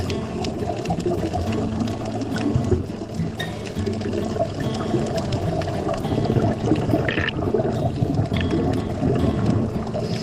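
Listening closely, nothing stood out as a technical problem at any point in the audio.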